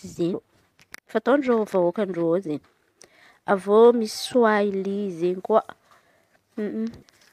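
Damaged data in a compressed stream causes brief glitches at 0.33, 4.25–4.27 and 7.01–7.03 s, where the decoder loses frame sync. Each is heard as a chirp, squawk, click or short hole.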